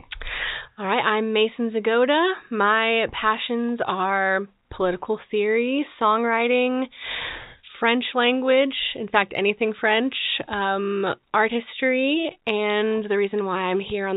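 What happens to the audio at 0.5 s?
Nothing goes wrong at 0.5 s: the speech passes intact through the narrowband telephone coding, with no break, glitch or added distortion at that moment.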